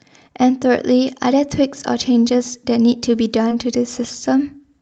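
A speech recording with a brief smeared wobble at about 3.49 to 3.53 s, where short concealed packet loss left a 20 ms gap that the receiver filled by extending the preceding sound, heard through a call codec whose top end stops near 8 kHz.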